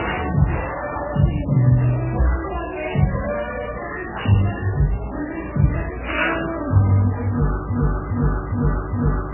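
From the start, nothing above 3 kHz survives, and what remains sounds watery and swirly, with faint detail flickering on and off between frames. This is heavy MP3 compression, likely at a very low bitrate near 8 kbps. The fixed treble cutoff and frame-to-frame swirl set it apart from simple low-pass filtering.

At 7.70 s a broken-record loop begins: a 0.41 s fragment repeats four times back to back, identical each time, through to the end, replacing the sound that should have followed. Because the pass is exact rather than rhythmic or varied, it points to a stalled player or stream, not genuine repetition in the material.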